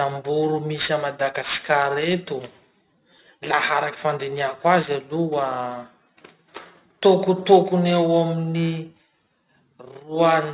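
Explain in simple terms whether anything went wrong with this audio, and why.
Aliasing runs through the whole clip: hissy speech sounds turn gritty and metallic rather than just muffled, because detail above 4 kHz folds back as wrong tones.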